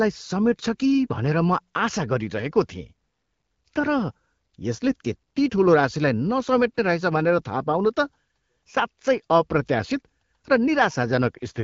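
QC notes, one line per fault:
No faults heard in this wideband HD Voice speech.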